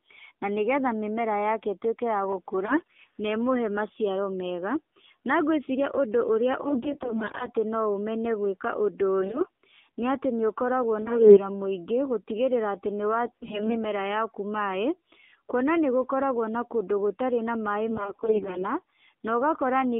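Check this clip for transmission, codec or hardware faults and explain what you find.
Two faults are present: mobile-codec coding throughout, and bursts of corrupted codec frames.

AMR narrowband mobile codec, throughout: the speech passed through a narrowband vocal-tract-model codec at a low rate, consistent with the 7.4 kbps AMR-NB mode. Its passband runs from about 300 Hz to 3.6 kHz, so the voice sounds thin, band-limited and plainly buzzy and synthetic.

AMR bit errors, at 2.66–2.93 s just after "ĩtuĩke ya", 6.62–7.50 s, 9.22–9.46 s, 11.02–11.47 s, 13.26–13.84 s and 17.90–18.65 s: a weak link flipped roughly 10 to 20 percent of the less-protected bits. The checksum still passed, so the decoder used misplaced pulses and wrong gain and spectral values. The voice keeps its pitch and level but turns hoarse, scratchy and gargly.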